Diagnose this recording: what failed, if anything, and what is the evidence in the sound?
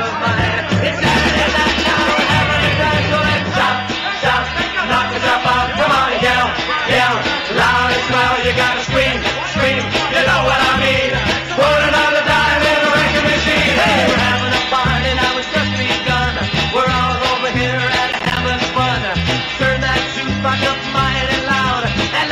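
A processor overload crackle at the driver or buffer stage, 18.12 to 18.37 s: several short silent holes, each roughly 10 ms, form a burst of crackle, not one clean dropout.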